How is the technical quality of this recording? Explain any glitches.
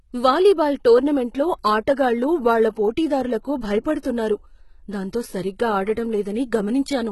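The recording is heavily compressed throughout, most likely by HE-AAC. Only the lower band is truly coded; the treble is patched in by copying lower bands upward, so s sounds turn gritty and lispy. A spectrogram shows repeated-looking upper bands ending abruptly at 11.8 kHz, which fits a low bitrate near 16 kbps.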